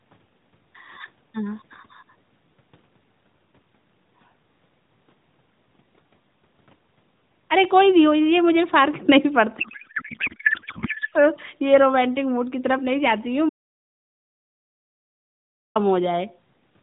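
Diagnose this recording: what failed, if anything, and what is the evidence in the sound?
Codec stage, at the network hand-off: from 9.60 to 11.14 s the speech turns into garbled noise and warble that barely tracks it. That's a codec payload misread. The sound points to octet-aligned AMR frames being unpacked as bandwidth-efficient, so every field lands in the wrong place.

Then there's an audio dropout to silence from 13.49 to 15.76 s, about 2.26 s of silence with no room tone at all. The input was likely lost upstream, maybe a link or device dropping out, while the recorder kept writing silence.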